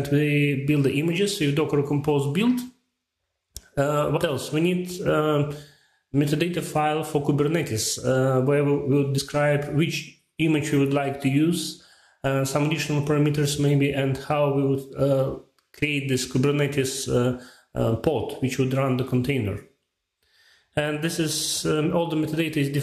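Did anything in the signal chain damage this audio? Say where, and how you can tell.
Yes. This is compressed frames skipped, at the codec or storage stage. At 4.16 to 4.18 s the sound jumps ahead by about 70 ms, roughly three frames. At 9.17 to 9.19 s it jumps by about 50 ms, roughly two frames. Each gap fits whole 23.2 ms frames that were missing or rejected by the decoder. On a waveform the envelope changes abruptly at each join. A spectrogram shows a vertical seam where the material before and after doesn't line up.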